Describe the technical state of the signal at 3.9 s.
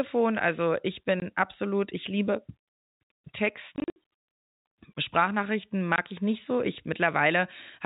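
At 3.9 s the signal is inside a stretch of packet loss filled with silence, running from 3.76 to 3.96 s. About 140 ms of audio is missing, scattered across those 200 ms. The longest single gap is 60 ms. The gaps fit 20 ms packets. The receiver played silence wherever a packet failed to arrive. The sound is chopped into holes with abrupt edges. The narrow telephone band of the G.711 coding carries on around them.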